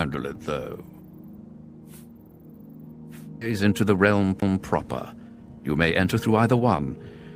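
At 3.41 to 3.43 s there is a skip ahead. The audio jumps forward with no gap filled in. About a second of material is gone. It was discarded while later audio was already queued. The two sides of the cut meet almost directly. The sound lurches abruptly, and the delay falls by roughly the same second.

From 3.51 to 4.14 s comes a jitter buffer speed-up. The buffer still held more audio than its target. The receiver trimmed short pieces, each a pitch period or a few, again and again. Playback runs at 106 percent. The pitch stays the same. Around 50 ms is removed in total, so the sound is only slightly hurried.

At 4.40 to 4.42 s there is a CD skip. The laser jumped to a different turn of the disc's spiral. The player mutes very briefly, which is heard as a tick. The sound then carries on from another place on the disc. The jump is sudden, and the material on either side does not connect.

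A second jitter buffer speed-up runs from 5.22 to 7.13 s. Here the pace is 112 percent. Roughly 200 ms is cut away in small pitch-period pieces. Pitch is unchanged, but the sound is clearly rushed over those two seconds.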